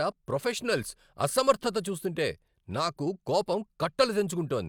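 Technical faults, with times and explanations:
No technical faults detected.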